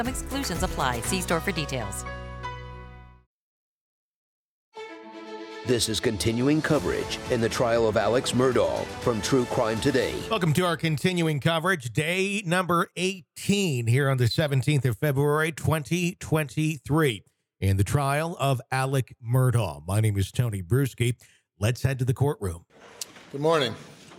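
No faults are audible anywhere in the clip.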